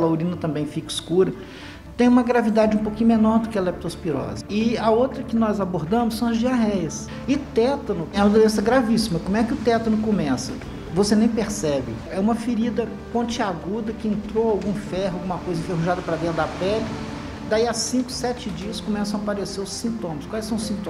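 No technical faults are audible.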